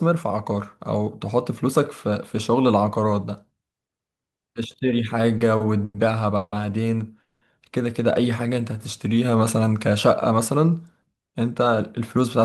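Speech with a burst of network-timing faults around the middle and end. Two short stalls from a late packet, at 5.37–5.42 s and 5.56–5.62 s, hold a sound for 30 and 40 ms with nothing lost. On a spectrogram they appear as briefly smeared, unchanging harmonic bands. Three call audio freezes at 5.84–5.96 s, 6.36–6.54 s and 7.22–7.43 s stretch the last sound into a fading buzz lasting 100, 160 and 190 ms, each ending in a 10 to 30 ms near-silent gap. The waveform shows a repetitive decaying envelope, likely from packets held up in transit that emptied the jitter buffer. A jitter buffer slow-down from 8.22 to 9.38 s repeats pitch periods to add 104 ms, so the speech plays at about 92% speed with unchanged pitch. Spectrogram features appear stretched in time while their spacing in frequency stays the same. A jitter buffer speed-up from 11.27 to 12.42 s trims roughly a tenth of a second, making the speech about 108% fast and hurried. 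Spectrogram features are compressed in time while pitch holds steady.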